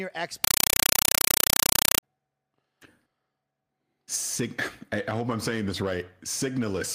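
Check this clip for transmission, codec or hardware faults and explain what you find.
One transmission fault is present. A compressed stream played as audio runs from 0.44 s to 2.03 s. The link carried encoded data, which fits a Dolby Digital (AC-3) stream, and the receiver treated the bitstream as ordinary samples instead of decoding it. Each encoded frame arrives as a burst of about 5.33 ms of noise-like data followed by zero padding, repeating 31.25 times a second. The speech is replaced by very loud, chattering static with a rapid, regular pulse.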